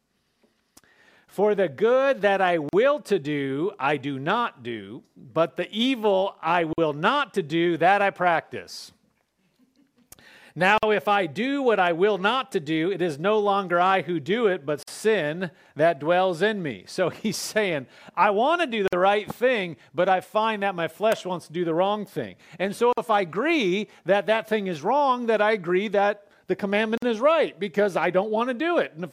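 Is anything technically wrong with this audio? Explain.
Yes. Gaps at joins of encoded pieces occur at 2.69 s (41 ms), 6.73, 10.78, 14.83, 18.88, 22.93 and 26.98 s (49 ms each), every 4 s. Separately encoded pieces were joined with their start delay and end padding left in, cutting abrupt silences with smeared edges into continuous sound.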